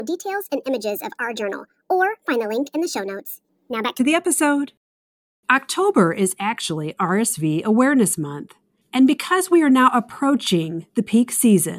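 Speech that, for the first 3.99 s, sounds high and hurried, running about 1.38 times too fast and pitched about 5.5 semitones sharp, before settling to a natural pace and pitch at "the episode". This is a wrong sample rate fault: the samples are played back faster than they were captured, with no rate conversion, so speed and pitch rise together. The ratio fits 32 kHz material being played out at 44.1 kHz.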